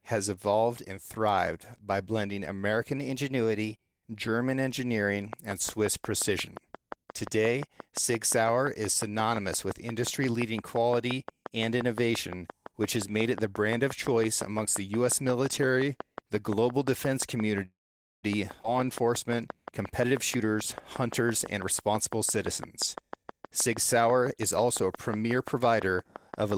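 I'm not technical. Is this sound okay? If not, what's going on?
No, there are several problems.

The first is a drift correction step. Software that keeps two clocks in step likely changed the playback speed in one jump to correct its timing. Right after "and thrived by blending", from 2.98 to 4.04 s, everything plays about 6% fast and sounds about a semitone higher. Then it snaps back. A second step from 15.57 to 16.11 s does the opposite, slowing about 6% and dropping about a semitone.

Next comes a train of clicks. Something, likely interference from nearby equipment or a faulty connection, keeps adding short pulses. From 5.33 s to the end, you hear a steady ticking at about 5.7 clicks per second. The ticks are loud, rise clearly above the speech and keep going through the pauses.

At 17.65 s there is a call audio freeze. Pieces of the transmission were likely held up on the way, so the receiver ran out of audio to play. 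It briefly carries the last sound on, then goes quiet for about half a second. At 18.25 s the speech resumes exactly where it stopped. Nothing is lost, but about 0.58 s of delay has been added.

At 18.63 s there is a skip ahead. A chunk of audio was thrown away while later audio was already waiting. About a fifth of a second of speech is missing, and the two sides are joined with almost no gap, so it sounds like a sudden jump.

Finally, there are three jitter buffer speed-ups. The receiver had built up too much waiting audio. To catch up, it snipped out many tiny slices, so the speech runs faster while keeping its pitch. From 20.00 to 20.51 s it is very hurried, at about 126% speed. From 21.02 to 22.48 s it is slightly quick, at about 105%. From 22.96 to 24.45 s it is noticeably quick, at about 110%.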